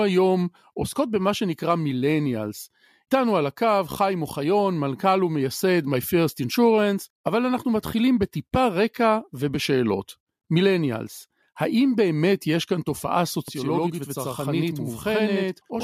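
Speech with channel delay (doubling) from 13.48 s to the end: one channel runs about 85 ms late, fitting a 4096-sample buffer, so the mono sum gives a single same-level slap rather than decaying room reverb.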